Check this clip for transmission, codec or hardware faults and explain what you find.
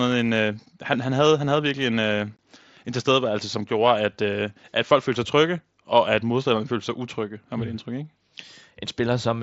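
One transmission fault: unconcealed Bluetooth headset packet loss at 2.37 s, a gap of roughly 20 ms. Lost headset packets, consistent with a few dropped mSBC frames, were replaced by silence or an idle pattern, leaving an abrupt hole in the speech.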